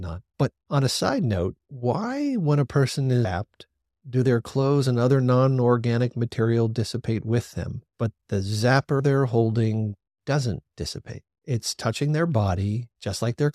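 At 3.25 s and again at 9.00 s the speech skips forward, with about a third of a second missing and the two sides butted together with no gap. This is likely audio missing between chunks, lost as one 6-second chunk closed and the next opened. The seamless splice and steady spacing set it apart from a dropout, which leaves silence.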